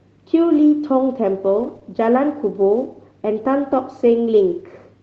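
From 1.59 to 1.77 s comes a lost packet rebuilt from error correction. About 100 ms of audio, which fits five separate lost packets, was replaced by the low-bitrate copies carried in the following packets. It sounds rougher and noisier, yet continuous. Unlike concealment, nothing is guessed, so there is no smear or gap.

Between 1.79 and 1.83 s, a short concealed packet loss follows. Roughly 20 ms never arrived and was filled by extending the preceding sound, then blended back. It is heard as a brief smear or wobble against the 8 kHz-limited Opus call audio. Unlike the rebuilt stretch, this content is invented rather than degraded, so a short sound here could disappear.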